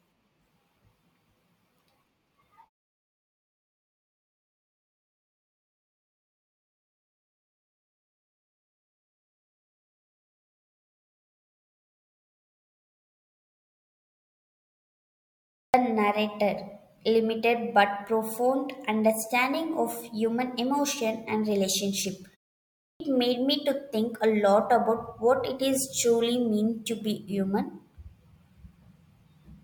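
This is a speech clip with a clipped start after a pause, twice. At 15.57 s, about 170 ms is lost before "narrator limited but profound", after a long silence. At 22.84 s, about 160 ms goes before "made me to think". The output device sleeps in silence and wakes late.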